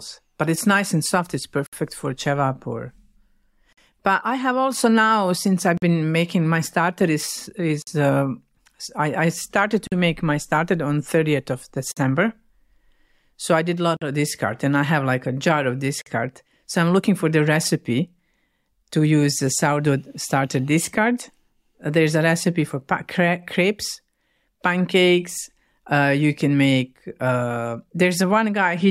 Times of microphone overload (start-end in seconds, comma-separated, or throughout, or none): none